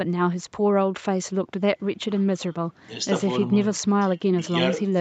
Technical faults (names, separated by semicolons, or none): none